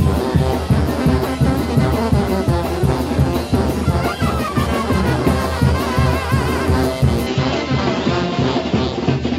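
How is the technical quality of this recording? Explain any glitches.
One glitch stands out near the end. From 7.27 s to the end, the input seems switched to a poorer device. Everything above 7.6 kHz vanishes without a gap or level jump. A faint new noise floor appears. This is likely a change of microphone.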